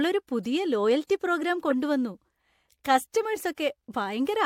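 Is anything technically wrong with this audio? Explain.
Yes. At 1.70 to 1.72 s, just after "പുതിയ ലോയൽറ്റി പ്രോഗ്രാം", a corrupt frame is decoded. Flipped bits in the compressed data reached the decoder, which played the damaged frames anyway. Misread gains and codes put energy at frequencies that do not belong there. About two frames are affected, so the error lasts roughly 20 ms. It is heard as a short, sharp blip of noise that peaks at around -15 dBFS.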